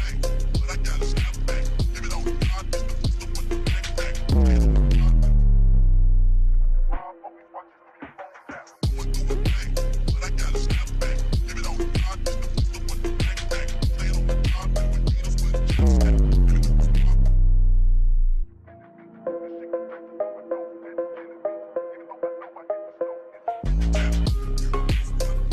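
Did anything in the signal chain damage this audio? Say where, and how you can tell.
No, nothing in the signal chain damaged this audio.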